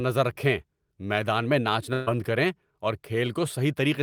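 At 1.93 s the speech smears into a held, fading continuation of the last sound for about 130 ms, then jumps ahead at 2.09 s with roughly 140 ms of speech missing. This is a burst of packet loss: several packets never arrived in time, so the receiver stretched and faded the final sound before resuming.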